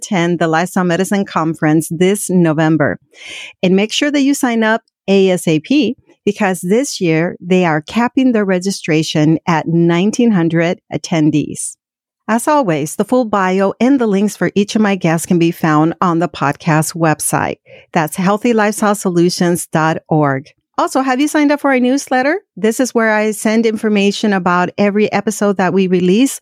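A speech recording with nothing technically wrong with it.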